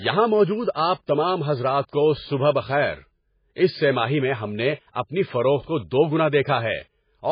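From start to end, the speech carries heavy codec damage, likely from MP3 compression. Nothing remains above 5 kHz. Weak frequency lines switch on and off between frames, so the sound turns watery or swirly. This fits a very low bitrate near 16 kbps.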